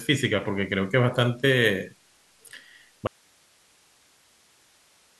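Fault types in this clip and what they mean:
Audio dropout to a faint residue: the wanted signal was likely lost upstream while the rest of the chain stayed live, so at 3.07 s the speech cuts off abruptly and only a low hiss, about 35 dB below the speech, remains until the clip ends.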